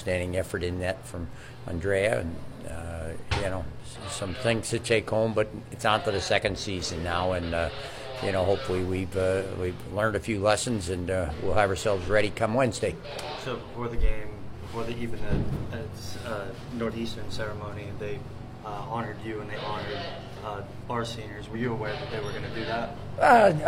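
At 13.33 to 13.38 s, 16.86 to 16.92 s and 21.51 to 21.56 s the audio is hit by damaged data in a compressed stream, each lasting about 50 to 60 ms. Corrupted bytes throw the decoder off, so it misreads those frames, loses sync and hunts for the next valid header, producing a brief chirp or squawk. A spectrogram shows narrow vertical bands of scrambled broadband energy, and the waveform shows short abrupt discontinuities.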